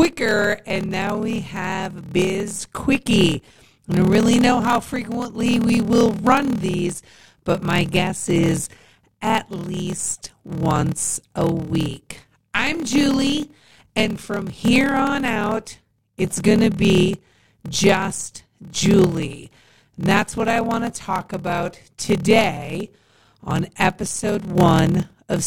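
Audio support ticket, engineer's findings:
Block size mismatch (padded) between pipeline stages, present throughout. Upstream stage writes shorter blocks than downstream reads, likely 1024-sample writes into roughly 1152-sample reads; remainder zero-filled. Result: short silent gap in every block, heard as a 38.3 Hz buzz over the speech. Playback runs slow at 0.889x, stretching delivery across the whole clip, while timbre stays.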